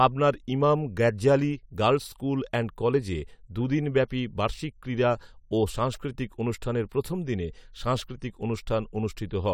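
No technical faults can be heard anywhere in the recording, and the signal holds steady throughout without any dropouts, clipping or other disturbances.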